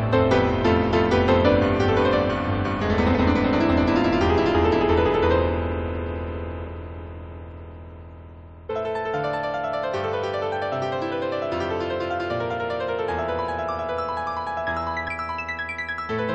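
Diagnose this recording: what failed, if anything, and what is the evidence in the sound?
The failure is in the codec stage: damaged data in a compressed stream. Brief chirps or blips occur at 0.91, 3.14, 6.67 and 8.69 s, and from 15.07 to 15.09 s, each about 10 to 20 ms long and spaced irregularly. Corrupted bytes make the decoder misread or reject frames and lose sync until it finds the next header. A buffer underrun would give clean silent gaps or clicks, not glitches like these.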